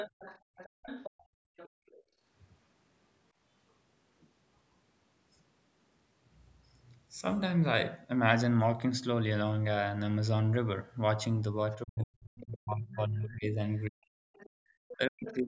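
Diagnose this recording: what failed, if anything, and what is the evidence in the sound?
From 0 to 2.02 s, 11.72 to 13.3 s and 13.85 to 15.35 s there's a second, quieter voice under the talker, roughly 15 to 20 dB down. That's the other side's voice leaking through, likely loudspeaker echo the call processing's echo canceller didn't fully remove.

Between 0.4 and 2.21 s the room background keeps dropping out, about a second in total, falling by about 33 dB at its deepest. That's background gated by the echo canceller: it clamped the mic hard while the loudspeaker was playing, then let go.

From 11.83 s to the end, the talker's own voice cuts out in pieces while the far side overlaps, around 40 dB down at worst, about three seconds in all. That's speech suppressed in double talk. The canceller likely took both voices for echo and ducked them together.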